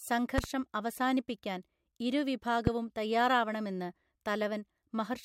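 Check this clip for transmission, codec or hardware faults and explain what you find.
Two loud pop events land on top of the speech. The first, from 0.38 to 0.46 s just before "അവസാനിപ്പിക്കാൻ ഇരു", is a quick double pop peaking roughly 15 dB above the speech. The second, from 2.67 to 2.70 s right after "അവസാനിപ്പിക്കാൻ ഇരു", is a single hit, around 20 dB up. Each is likely a sudden voltage jolt, from a plug, a switch, static or a driver glitch, that the downstream circuitry turned into a short thump while the speech carried on underneath.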